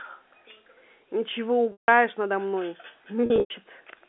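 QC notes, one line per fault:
1.72–1.88 s and 3.26–3.54 s, packet loss with pitch repetition: the first gap loses 160 ms in one block. The second scatters 180 ms of loss over 280 ms, with the longest run 100 ms. Both fit 20 ms packets. The receiver loops the last pitch period, so each gap starts as a held, buzzy tone that fades to silence before a short cross-fade back. A plain dropout would cut straight to silence, and a stutter would repeat whole syllables.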